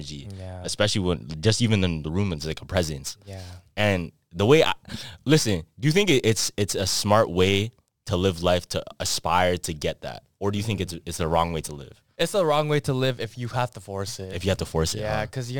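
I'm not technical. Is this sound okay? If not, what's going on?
No, from about 2.40 s to the end there's crude rate conversion: samples were duplicated, not smoothly converted, leaving a gritty fizz riding on the speech.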